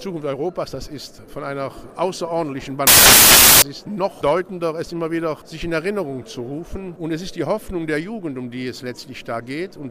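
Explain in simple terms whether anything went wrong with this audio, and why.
From 2.87 to 3.62 s, samples were built from the wrong bytes: each value's pieces were joined incorrectly, turning the sound into broadband noise.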